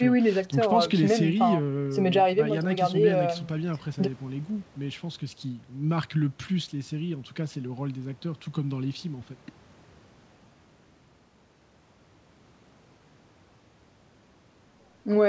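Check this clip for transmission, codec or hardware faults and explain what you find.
Nothing is wrong with the signal: the speech came through a call path behaving as intended, with its content stopping at 8 kHz, which fits a wideband call codec such as G.722 running at 64 kbps.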